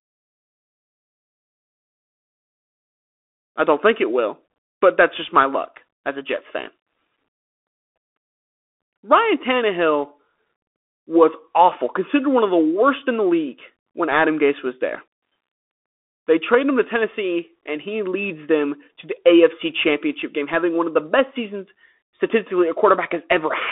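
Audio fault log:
Throughout: Bluetooth CVSD headset codec. The speech is squeezed into a 250 Hz to 3.5 kHz band with nothing above 3.7 kHz. One-bit delta coding, consistent with a 64 kbps CVSD link, adds granular hiss and scratchy s sounds that a clean telephone band-limit lacks.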